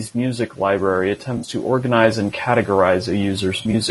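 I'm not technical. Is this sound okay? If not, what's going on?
No, the recording has several problems.

USB whine runs through the whole clip: a faint, steady high-pitched tone at 8 kHz. A USB connection draws power in rapid, regular bursts, and that electrical pattern leaks into the microphone's circuit, where it is heard as this thin whistle.

Low-delay AAC compression damage is also present throughout. The voice sounds rough and grainy, with a hiss between its tones and a thin, artificial top end. This is likely caused by AAC-ELD, a fast video-call format that squeezes sound into very short chunks and loses detail doing so.

Automatic gain rising starts at 0.12 s and continues to the end. The recording device judged the input too quiet and kept turning its own volume up. The voice and the background both swell noticeably louder together.

AAC frame loss with concealment happens twice. 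From 1.37 to 1.47 s, some small chunks of sound went missing, and the player filled the gap by guessing from what came just before, leaving a smeared, noisy patch. From 3.57 to 3.75 s, several shorter gaps are scattered across that stretch and are patched the same way.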